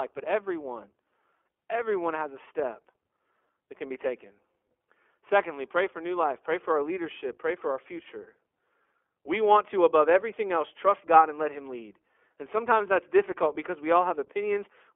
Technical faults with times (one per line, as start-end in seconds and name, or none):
0.00-14.95 iLBC codec